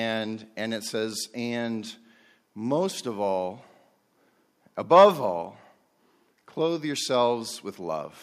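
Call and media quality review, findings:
No audible faults found in this speech recording.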